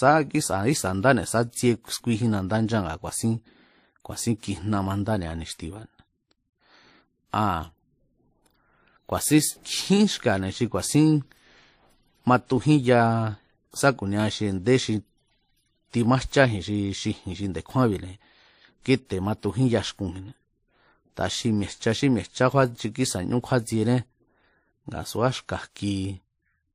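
Transcoding between lossy codecs, throughout: nothing above 15.2 kHz, with two layers of different codec artefacts heard together that likely come from low-rate MP3 re-encoded as WMA.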